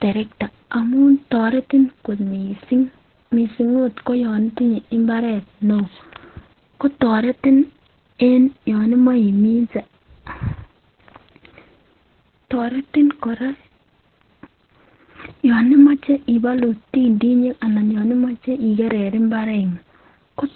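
Throughout the speech, Opus voice compression is heavy: the band stops near 4.2 kHz, typical of SILK's narrowband mode, and the excitation is coded coarsely, which fits a bitrate around 8 kbps. The result sounds muffled, hoarse and slightly robotic.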